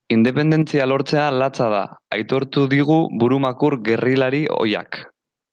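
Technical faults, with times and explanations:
Throughout, gain pumping: the gain swings about 10 dB, pulling loud and soft parts closer in level and squashing the sound, likely excessive input gain clamped by a fast limiter.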